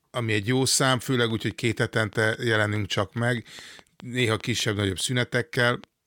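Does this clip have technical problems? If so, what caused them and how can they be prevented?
Yes, there's a train of clicks from 1.3 s to 5.85 s: about twenty evenly spaced ticks at 4.85 per second, poking a few dB above the speech and audible in the pauses. That's likely interference from nearby equipment or a faulty connection or power supply. Keep gear and cables apart and check the interface.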